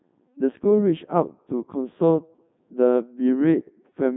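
From start to finish the speech carries Codec 2 vocoder damage, heavy at 3.2 kbit/s. The voice is resynthesised from sine waves, so it sounds robotic and buzzy, with nothing above 3.8 kHz.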